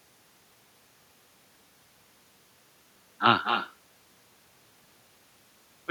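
From start to finish the speech carries echo with no canceller: the far end's loudspeaker output is picked up by its microphone and returned unremoved, so every phrase is trailed roughly a fifth of a second later by a copy about 7 dB quieter and thinner. On a waveform each burst has a smaller ghost burst just behind it; a spectrogram shows each syllable's harmonics repeated, weaker and shifted right by the same fixed delay.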